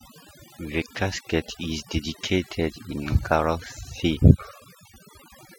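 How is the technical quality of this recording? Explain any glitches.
The main problem is overdone noise removal, running through the whole speech clip. The noise reduction was pushed so hard that it shuts off frequency bands sitting near its noise estimate, taking the quieter bits of the voice with them. So the background drops and breaks up into little twinkling specks.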